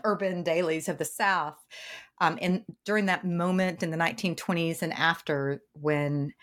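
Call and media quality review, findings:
No faults found in this call and media quality review.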